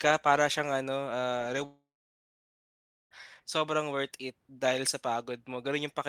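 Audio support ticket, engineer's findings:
Long network dropout, 1.65 to 3.13 s, after "para siyang ano ah". Last sound smeared into a short fading buzz, then about 1.25 s of near-silence. Speech resumes at "sobrang worth it dahil" with roughly 1.46 s missing. Likely cause: packet loss in the network path. Receiver concealment filled the gap but could not recover the lost audio.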